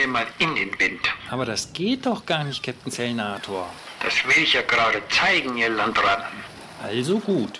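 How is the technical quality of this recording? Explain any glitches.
No glitches to explain; the recording runs continuously, with nothing interrupting or disturbing the signal at any point.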